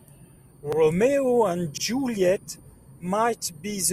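Overlapping chunks at 0.73 to 0.78 s, 1.78 to 1.83 s and 2.83 to 2.88 s: the speech was handled in 1.0 s chunks, and each new chunk began 50 ms before the previous one had finished, so that 50 ms slice plays twice at every join. Each join produces a brief stutter or click, and the three recur at a steady interval of just over a second, matching the chunk length plus the repeated slice.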